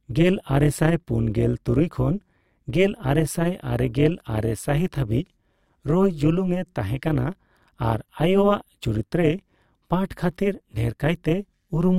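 From start to finish the speech carries overlap-add ripple: the frames were stitched back together with an overlap that doesn't sum to flat gain, so the level dips about 11 dB once per frame, around 200 times a second, giving a metallic buzz with extra tones around each note over everything.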